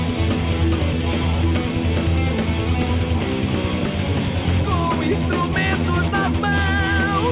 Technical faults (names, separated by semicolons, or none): none